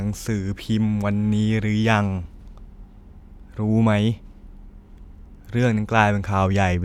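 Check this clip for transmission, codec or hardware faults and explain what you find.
No faults can be heard in the speech. Nothing in the audio calls for further explanation.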